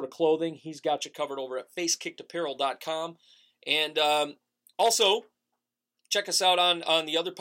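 From 0.98 s, just after "of clothing he's", to the end, pre-emphasis is left on. The treble lift, which fits a J.17 curve, is never undone, leaving 10 kHz about 11 dB hot relative to 1 kHz. Speech turns thin and hissy, and a spectrogram shows persistently brightened upper bands.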